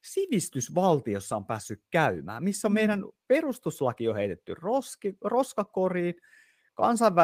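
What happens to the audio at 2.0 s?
At 2.0 s the speech carries on without interruption, and nothing in the signal is disturbed at that point.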